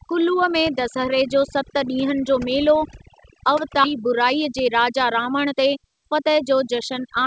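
Overdone noise removal runs through the whole speech clip: frequency bands near the estimated noise floor are pulled down too hard, leaving a lowered background that breaks up into twinkling specks. At 3.84 to 3.86 s a skip ahead drops roughly a second of audio with no fill, splicing the two sides almost directly together. From 3.96 to 6.52 s a jitter buffer speed-up trims short pitch-period pieces, about 200 ms in total, so the speech runs at 107% speed at unchanged pitch and sounds hurried. Throughout, nothing is heard above 8 kHz, which fits a wideband call codec such as G.722.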